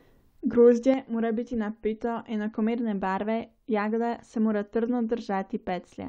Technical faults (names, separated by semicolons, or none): one channel drops out